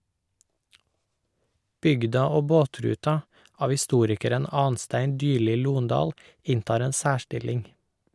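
Nothing stood out on listening to this speech recording.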